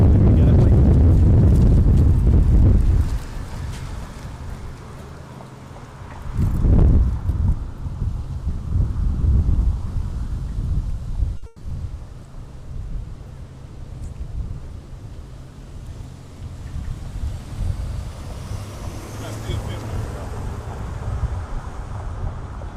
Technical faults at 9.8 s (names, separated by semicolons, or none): none